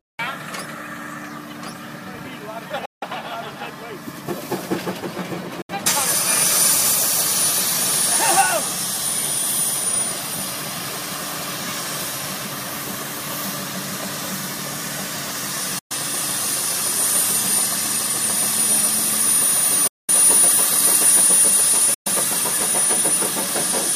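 Likely Bluetooth dropouts at 2.85, 5.62, 15.79, 19.87 and 21.94 s cut the sound to silence for 163, 70, 116, 209 and 116 ms. Packets arrived too late for playback and were discarded, and each time the audio resumes further along, as if it had kept playing.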